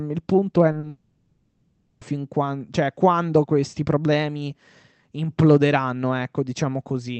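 Italian speech carried over a call codec whose band stops near 8 kHz, which fits Opus at a modest bitrate. Right after "il punto è", two short concealed packet losses at 0.71–0.75 s (20 ms) and 0.79–0.85 s (40 ms) smear and wobble the sound. The decoder extended the previous sound to bridge each gap, seen on a spectrogram as briefly stretched, blurred harmonics. From 0.89 to 2.03 s comes a likely long network dropout lasting 1.12 s. The receiver kept synthesising a fading buzz and hiss, so the waveform shows a decaying, repetitive envelope and the spectrogram flat, smeared bands rather than speech structure. Clear speech resumes at "fin quando cioè quando" with the lost stretch gone.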